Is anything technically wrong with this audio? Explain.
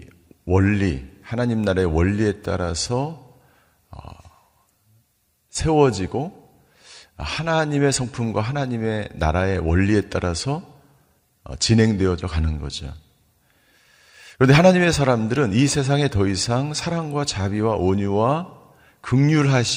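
No, nothing is technically wrong with this audio.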